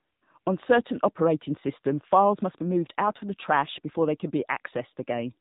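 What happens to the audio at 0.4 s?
From 0.40 to 0.46 s, AMR comfort noise fills a 60 ms gap where no speech frames were sent. Unlike a dropout to silence, the gap holds a smooth, steady synthetic hiss that switches in and out. Throughout, including this moment, the AMR narrowband mobile codec cuts everything above 4 kHz and makes the speech buzzy and synthetic, which fits a low bitrate around 7.4 kbps. A simple low-pass filter would muffle the sound without adding that buzz.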